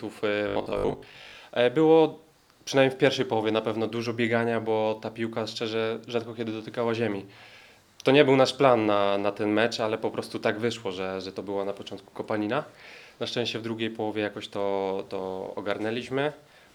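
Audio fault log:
0.48–1.36 s: robotic sound from repeated short buffers. The audio turns into a rigid, metallic buzz fixed at 50 Hz, which fits a 20 ms segment being looped. Roughly half the material is repeats, likely because new audio arrived too seldom and the gap was filled from the last buffer.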